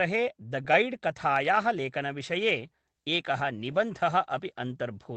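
Right after "गैड् कथायाः", at 1.75 s, and again at 3.71 s, there's a lost packet rebuilt from error correction: a single 20 ms frame was lost, and the decoder played the low-bitrate backup copy from the next packet, so there's no gap, just a brief rougher, noisier patch in the speech.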